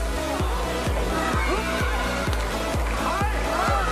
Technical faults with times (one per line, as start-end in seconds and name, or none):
none